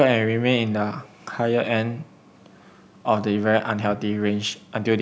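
At 1.97 to 2.02 s, 3.87 to 3.97 s and 4.49 to 4.57 s the speech briefly ducks, by about 15 dB and then about 20 dB twice, as short dips. This is most likely speech suppressed in double talk: an echo canceller could not separate the talker from the overlapping far-end echo and attenuated both. On a waveform these show as sudden notches in the envelope; a spectrogram shows brief vertical fades across the band, which tops out at 8 kHz.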